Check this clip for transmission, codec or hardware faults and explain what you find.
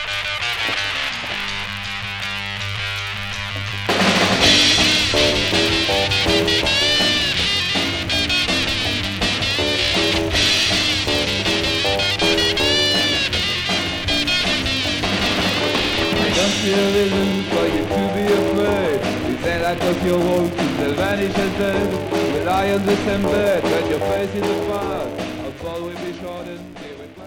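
A buzz at 172 Hz runs through the whole clip, rising and falling with the sound's level: a filter restarted on every block. The filter resets to silence at each block boundary, leaving a small transient, and that rate fits 256-sample blocks.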